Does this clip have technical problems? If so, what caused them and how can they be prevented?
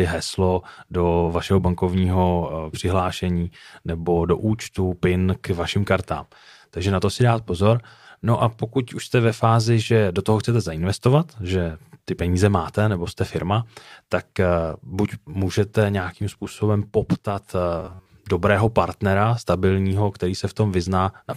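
Yes. From 17.80 to 18.10 s, between "můžete nějakým způsobem poptat" and "dobrého partnera stabilního který", the speech collapses into a rigid metallic buzz pitched at 93.8 Hz. This is robotic sound from repeated short buffers, likely from audio arriving too slowly. The software fills the gaps by looping roughly 10.7 ms of sound, one over the buzz frequency, and skips most of the real audio, so the speech only loosely comes through. It can be prevented by giving the audio path a larger jitter or playout buffer and keeping network and CPU load steady enough that new audio arrives on time.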